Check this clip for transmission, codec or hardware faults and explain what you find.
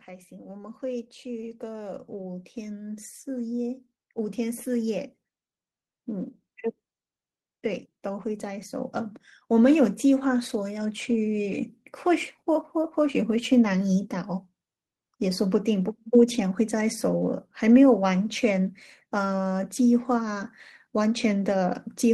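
Two stretches of automatic gain rising are audible in this speech recording. From 0.05 to 6.37 s the level climbs by about 11 dB, and from 7.62 to 11.61 s by about 5 dB. The gain control judged the input too quiet and raised its amplification slowly, so the voice and the background noise swell together. That slow, shared rise is what separates it from a speaker moving closer, which would lift the voice but not the room noise.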